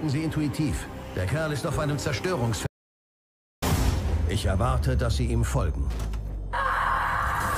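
At 2.67 s the sound stops dead and gives way to silence, with no room tone, until it resumes abruptly at 3.62 s; about 0.95 s of audio is missing. This audio dropout to silence most likely came from the input being lost while the recording kept writing zeros.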